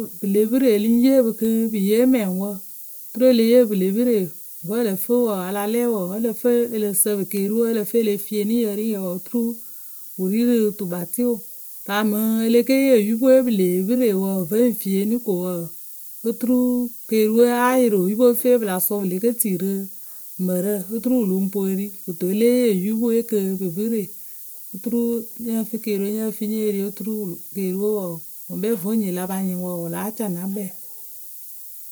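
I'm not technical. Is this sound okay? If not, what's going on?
No, not quite. The speech has a steady, thin hiss running under it from start to finish, and it gets noticeably brighter and sharper toward the top end, a bit like a fizz sitting on the voice. That's low bit depth with noise shaping: the audio was stored with only 7 bits, so it's rounded very coarsely, and the resulting error was pushed up into the high frequencies. The hiss is fairly loud next to the voice.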